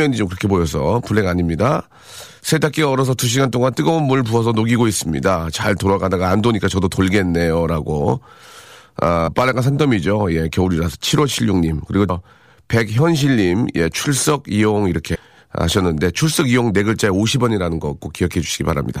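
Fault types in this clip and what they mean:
Compressed frames skipped: whole 26.1 ms blocks of the coded speech never play, so the audio jumps forward, roughly 0.2 s at 9.26 s and roughly 0.1 s at 12.08 s and 15.14 s, each join heard as a brief smeared blip rather than a click.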